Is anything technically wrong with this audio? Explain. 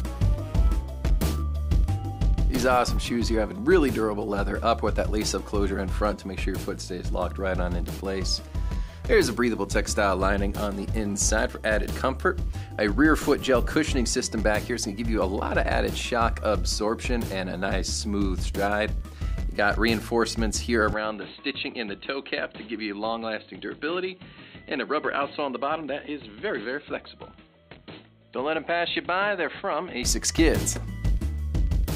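Yes. From 20.93 s to 30.03 s the recording shows an input switched to a poorer device: the system likely changed its capture source mid-take to a narrower-band microphone or headset profile. Nothing reaches above 4.2 kHz, so the sound turns dull and boxy at once, with no gap at the switch. The level drops by a few decibels, and a faint new background noise appears, sitting well below the signal.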